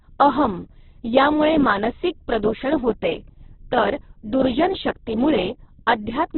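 From start to finish, the speech is squeezed into a narrow band with nothing above about 4.1 kHz. It sounds muffled and boxed in. It is also rough and grainy, with a noisy texture. This is likely Opus compression in its music mode. At a very low rate, the encoder keeps each band's energy but fills the detail with folded or noisy substitutes. The heavy damage fits a bitrate near 8 kbps.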